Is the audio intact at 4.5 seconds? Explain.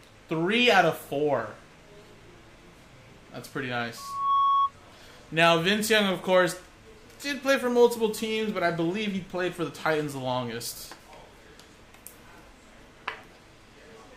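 No. At 4.5 s a loudspeaker feedback squeal is sounding, running from 3.97 to 4.73 s. The microphone picks up its own loudspeaker output and the loop gain passes unity at 1.1 kHz, so a pure tone swells over roughly a third of a second to sit about 5 dB above the program.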